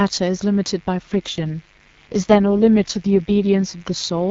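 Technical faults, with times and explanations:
Throughout: mains buzz, a steady raspy 50 Hz buzz about 35 dB below the speech, its sharp switching spikes spreading harmonics up into the kilohertz range.
0.99 to 3.76 s: AMR rate drop, the wideband codec falls from 12.65 to 6.6 kbit/s, so speech turns rough and synthetic without gaps or bandwidth loss, then clears.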